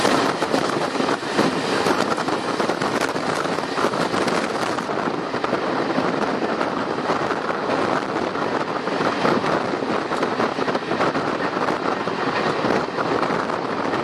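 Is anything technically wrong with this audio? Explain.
Yes. From 0.0 to 4.88 s, pre-emphasis left on: an FM 50 µs treble boost was never de-emphasised, leaving 10 kHz about 11 dB hot relative to 1 kHz, so the sound is thin, bright and sibilant.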